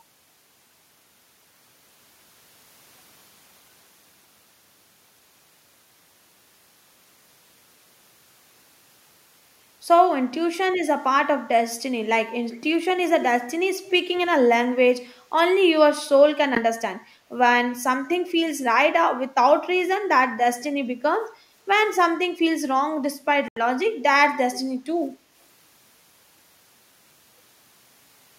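At 13.85–13.93 s and again at 14.16–14.27 s, faint scraps of the speech return about 217 ms late, well below the main level: an echo leak, likely a loudspeaker echo canceller letting residue through. At 16.55–16.60 s and 23.48–23.61 s the sound drops out briefly, for 12 ms and then 82 ms, before resuming: a Bluetooth stall, likely from delayed packets draining the headphone buffer.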